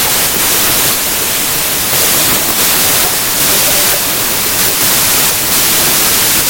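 From start to finish, a wrong sample width: packed 24-bit data are read as 32-bit integers, so bytes from neighbouring samples fuse into single values. The speech plays about 1.33 times too fast and too high, buried under loud, harsh noise.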